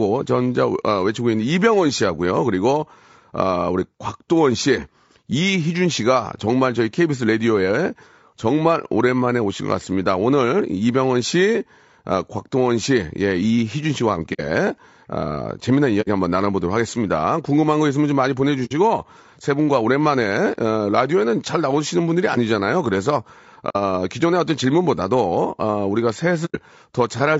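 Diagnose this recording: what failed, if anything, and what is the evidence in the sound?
The speech sounds rough and grainy throughout, with a noisy haze between the voice harmonics and a thin, somewhat synthetic top band. That fits a low-delay AAC compression stage, likely AAC-ELD at around 32 kbps. Its short frames smear the pitch structure, and the bit budget runs out. On a spectrogram the harmonic stripes look blurred and speckled, noise fills the gaps between them, and the energy above the core band looks patchy or flattened.

AAC frame loss with muting occurs at the network or decoder stage at 14.33–14.41, 16.01–16.08, 18.65–18.72, 23.69–23.76 and 26.45–26.56 s. Each is a soft-edged gap of about 70 to 110 ms, which fits whole frames going missing and the decoder zeroing them. The overlapping windows fade the sound down and back up. The waveform shows tapered dips to near silence, and the spectrogram shows clean vertical blank bands.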